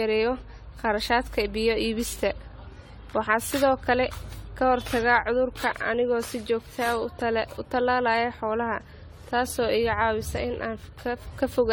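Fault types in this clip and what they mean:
Generation loss: re-encoding stacks up fresh damage each pass, and this speech sounds swirly, hollow and smeared, likely from around ten rounds of roughly 64 kbit/s AAC.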